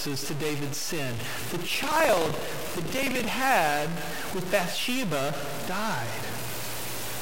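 From the first moment to the last, the speech carries distortion, and the gaps between phrases fill with a steady hiss. The likely cause is a stuck bit. On a waveform the samples show a fixed offset jump near zero, and a spectrogram shows broadband noise spread across the pauses.

From 1.71 s to 3.31 s, buffer tearing adds a robotic rattle at 23.4 Hz that sounds only while speech is present. This fits a 2048-sample buffer. Each period splices in about a tenth of old audio from roughly 100 ms earlier, with hard joins appearing as regular vertical stripes on the spectrogram.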